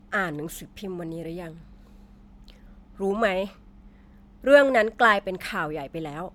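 A speech clip that sounds swirly, smeared and hollow throughout, with blurred attacks, most likely generation loss from MP3 encoding repeated about four times at what sounds like 128 kbit/s.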